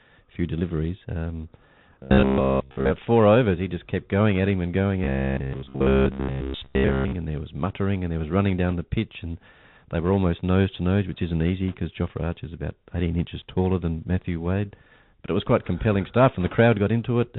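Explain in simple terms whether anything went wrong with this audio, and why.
Yes, several things went wrong. The whole recording passed through a Bluetooth CVSD headset codec, the basic voice codec many headsets use for calls. It stores the sound as a fast stream of up-or-down steps and discards everything above 4 kHz. That makes the speech sound muffled and phone-like. Loud, bright sounds outrun the steps and distort, s sounds turn scratchy, and a grainy hiss sits underneath the whole clip.

Twice the voice turns into a stiff, metallic buzz: from 2.03 to 2.90 s, just before "four overs", and from 5.04 to 7.13 s, between "at him and going" and "and there was muttering". The buzz has a fixed pitch of about 67 Hz, which fits the same 15 ms slice of audio being replayed over and over while most of the real sound in those stretches is skipped. The likely cause is robotic sound from repeated short buffers, where new audio arrives too late and the software fills the gap by repeating what it last had.

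There are also four brief bursts of bit errors on a Bluetooth voice link: 5.53 to 5.61 s, 8.69 to 8.73 s, 11.68 to 11.76 s (just after "nose which isn't easy"), and 16.41 to 16.55 s. In each burst, around one or two bits in every hundred were flipped in transit. These bursts are not sharp clicks. They come through as short patches of rushing, crackly noise. The last burst is both the longest and among the heaviest.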